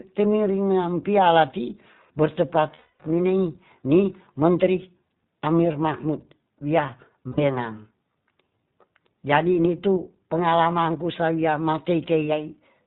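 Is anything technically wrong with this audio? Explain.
Yes. The whole clip passes through the iLBC codec. It keeps nothing above 4 kHz and codes each short frame on its own. The damage is plainly audible: the speech sounds thin, slightly rough and synthetic. The character fits the 15.2 kbps, 20 ms frame mode.

There are also lost iLBC frames, from 2.74 to 3.02 s and from 7.28 to 7.40 s, just after "ahmir mahmut wia". The decoder fills each gap by repeating the last pitch cycle mixed with noise. The first gap lasts 260 ms and the second 100 ms. Each sounds like a held, buzzy vowel, and the speech recovers almost at once.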